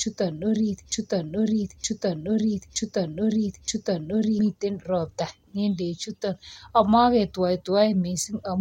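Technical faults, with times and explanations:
0.92 to 4.39 s, broken-record loop: the player, encoder or stream most likely stalled and kept resending the last fragment it held instead of moving on. The result is a 0.92-second slice of speech repeated exactly, back to back, four times over about 3.5 seconds, so the same syllables return with identical timing and inflection. Whatever should have been heard during that stretch is gone, and normal speech resumes at 4.39 s.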